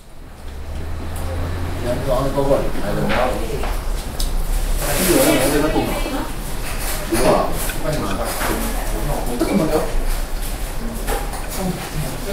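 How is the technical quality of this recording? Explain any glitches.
The recording has three brief glitches where the audio jumps ahead. At 0.75 s, 3.63 s and 4.82 s there's a short jump, and roughly 150 ms, 200 ms and 100 ms of sound go missing. These are compressed frames skipped: whole frames, about 32 ms each here, were lost or rejected as damaged, so playback leaps forward.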